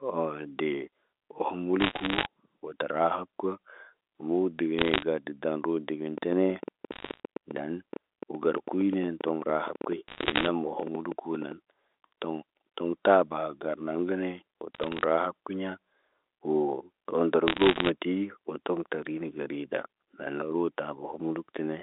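Bit errors on a digital phone line appear as short bursts of crackle at 1.80–2.26 s and 4.79–5.03 s. Flipped bits in the telephone-coded samples make sharp, random ticks, at an error rate of around 1 percent or less.

From 6.18 to 11.53 s a train of clicks runs at about 9 per second, roughly fifty in all, unevenly spaced and peaking about 5 dB above the speech. These look alike and continue through pauses, and likely come from interference from nearby equipment.

Within that span, further bit-error bursts land at 6.92–7.20 s and 10.08–10.47 s. Later ones come at 14.74–15.04 s and 17.48–17.90 s.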